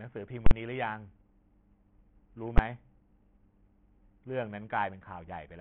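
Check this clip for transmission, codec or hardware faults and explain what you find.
Two kinds of fault are present: codec damage throughout the speech, and two full-scale bursts from invalid numbers.

The first runs the whole clip. Nothing survives above 5.4 kHz, and the remaining band sounds gritty and rough. The likely cause is Bluetooth SBC compression at a starved setting, which fits a bitrate near 48 kbps. SBC splits audio into a few wide sub-bands without a hearing model. With so few bits, the top bands get nothing and the rest are coarsely quantised. The treble vanishes, and grainy noise and aliasing remain.

The second is invalid numbers at full scale, heard twice. A calculation produced infinite or undefined values, and each one was forced to the largest positive or negative value. From 0.46 to 0.51 s, a 46 ms block is pinned there. It sounds like a very loud pop at each edge with dead air between, which fits a 2048-sample block. 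At 2.58 s, a block of about 12 ms lands as a single sharp bang.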